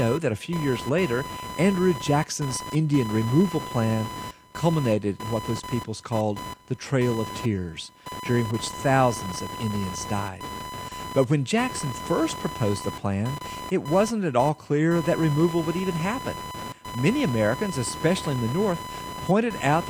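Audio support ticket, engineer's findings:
Computer activity noise, whole clip. Buzzy chirping pulse train near 1 kHz, roughly 10 dB under the speech, tracking machine load rather than the talker. Component: shared audio ground. Mechanism: CPU/GPU/mouse current swings modulating ground. Spectrogram: bursty vertical striations, harmonic comb from 1 kHz upward, present in speech gaps. Waveform: raised fuzzy floor between phrases.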